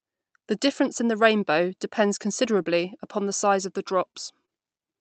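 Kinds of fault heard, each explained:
Scattered short gaps: brief ticks and smears from 2.49 to 4.49 s, where about three lost packets, 60 ms in all, were filled by extending prior sound.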